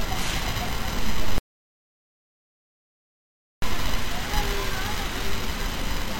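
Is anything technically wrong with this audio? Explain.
Yes. From 1.38 to 3.62 s there is an audio dropout to silence. The input was likely lost while writing continued, leaving 2.24 s of silence with no room tone, unlike a quiet passage or gate.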